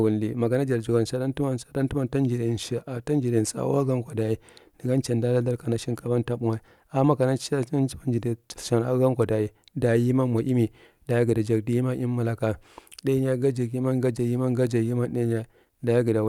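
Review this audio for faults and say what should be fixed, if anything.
No technical faults can be heard anywhere in the speech. Nothing needs to be fixed.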